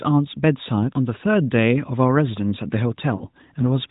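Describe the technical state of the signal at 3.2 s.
At 3.2 s the sound briefly smears and sags, holding an unnaturally steady tone before it dips and comes back a little weak and rough. This is lost AMR speech frames, spanning about 3.16 to 3.26 s. Around 40 ms of data failed to arrive intact, which fits two 20 ms frames. The narrowband AMR decoder bridged the gap by repeating the last good pitch and vocal tract settings at falling gain, still limited to below 4 kHz.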